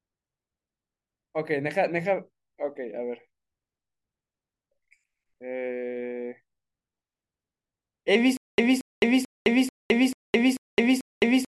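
Stutter with silent gaps from 8.37 s to the end: a 228 ms burst repeats seven times between 212 ms silences, likely a stalled stream.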